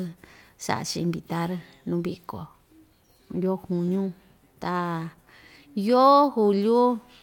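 Nothing technical goes wrong anywhere in this stretch of speech, so there's no fault to point to at any moment.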